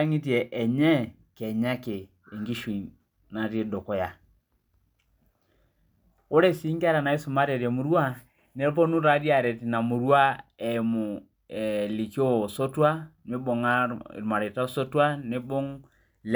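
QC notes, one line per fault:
No faults heard in this speech recording.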